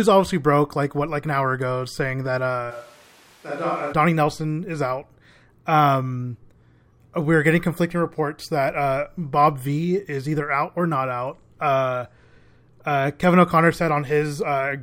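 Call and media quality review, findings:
Switch to a distant microphone, 2.72 to 3.91 s, right after "hour ago saying that". Speech suddenly roomy, hollow and thin in the bass, level about 10 dB down, room noise around 25 dB below speech. Likely close-mic dropout with fallback to a far pickup. Abrupt return at 3.91 s.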